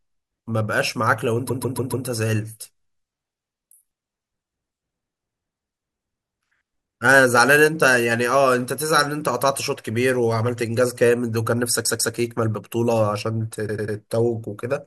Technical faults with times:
1.48-2.05 repeated frames
11.85-12.13 repeated frames
13.67-13.96 repeated frames

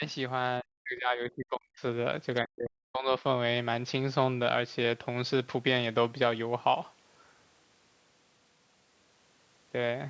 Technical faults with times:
0.61-1.82 speech suppressed in double talk
2.42-3.22 speech suppressed in double talk

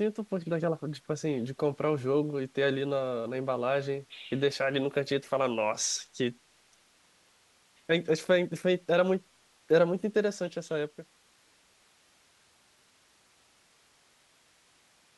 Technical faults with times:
none

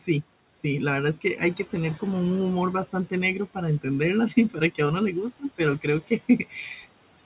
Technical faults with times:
0.00-7.25 noise suppressor artifacts
4.50-4.79 speech cut by the noise suppressor
5.81-6.21 speech cut by the noise suppressor

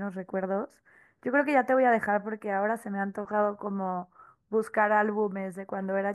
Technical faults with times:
none

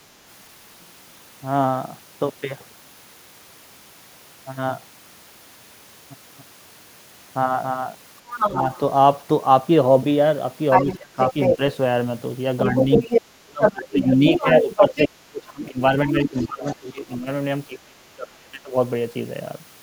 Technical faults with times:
6.38-7.94 doubled audio track
8.31-8.80 other side's voice leaking through
10.70-11.57 other side's voice leaking through
10.86-11.60 speech suppressed in double talk
12.58-15.08 other side's voice leaking through
12.64-18.74 speech suppressed in double talk
16.10-16.76 other side's voice leaking through

